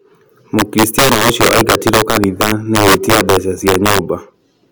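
Throughout the speech, the loudest moments break into violent, sharp cracks, harsher than ordinary clipping. This is integer overflow: with the signal driven about 6 dB too hot, a small share of peaks exceeded the integer limit and wrapped to the opposite sign instead of being held.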